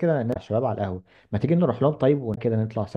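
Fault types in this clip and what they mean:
Damaged data in a compressed stream: Part of the encoded speech data is corrupt. The decoder misreads those frames, loses sync and hunts for the next valid frame header. This is heard as two brief glitches, at 0.30 to 0.36 s and 2.32 to 2.38 s.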